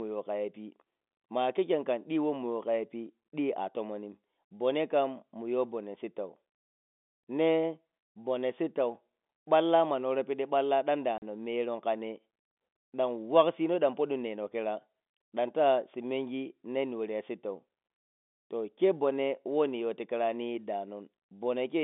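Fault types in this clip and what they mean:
Packet loss filled with silence: the speech drops out abruptly into dead silence with hard edges, once from 11.18 to 11.22 s, just after "worow piɗi balla ɗan", and again from 17.88 to 17.90 s. The gaps last 40 ms and 20 ms, which fits lost 20 ms packets. The receiver had nothing to play for those stretches and inserted silence instead of concealing them, over a narrowband telephone line.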